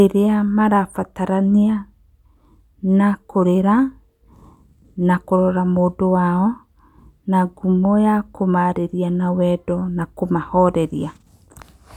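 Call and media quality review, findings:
No audible faults found.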